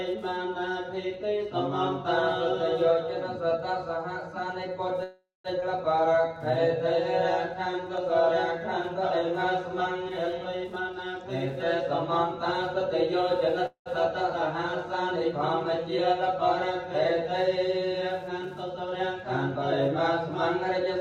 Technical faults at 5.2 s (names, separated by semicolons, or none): Wi-Fi interference; call audio freeze